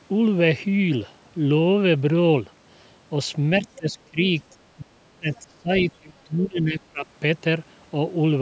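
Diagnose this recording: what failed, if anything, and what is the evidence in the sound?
Speech suppressed in double talk, at the call-processing stage. The speech dips and breaks up at 3.77–4.2 s, 4.77–5.71 s and 5.98–7.07 s, by roughly 20, 35 and 25 dB. The echo canceller likely couldn't separate this talker from far-end echo and attenuated both.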